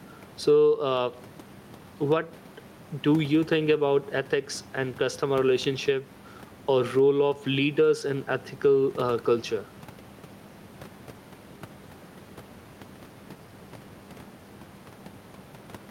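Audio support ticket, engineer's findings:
Gain pumping, whole clip. Gain swing of around 10 dB. Dynamics squashed. Likely cause: mic input gain far too high, with a fast limiter or compressor clamping on each peak. Waveform: flattened speech envelope, loud and soft parts closer in level. The room noise sits about 31 dB below speech.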